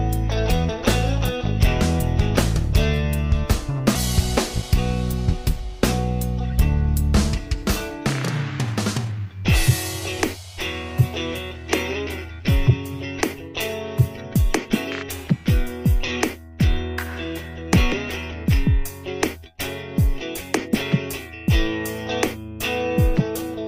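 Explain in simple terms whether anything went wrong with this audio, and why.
Two things went wrong. At 3.95 to 3.97 s there is a skip ahead: about a second of audio is simply missing, and playback jumps straight from one side of the gap to the other. Unlike a dropout, there's no silence or filler where the missing part was. It most plausibly happened because the receiving end had built up too much waiting audio and threw a chunk away to catch up.

From 8.43 to 9.27 s there is a jitter buffer speed-up: the sound runs about 8% fast, trimming roughly 70 ms in total, so it feels briefly rushed. Tiny slices were cut out over and over to shrink a backlog. Unlike a sped-up tape, the pitch stays the same.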